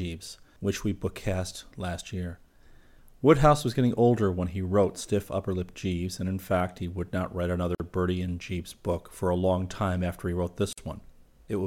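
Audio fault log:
7.75 s and 10.73 s: gap at a join of encoded pieces, a gap of about 50 ms right after "would not write another" and "time after he wrote," with smeared edges. It's encoder start delay and end padding left in where separately encoded pieces were joined untrimmed, so the speech simply resumes where it stopped.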